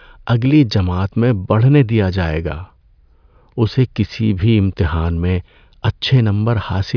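No technical faults are audible.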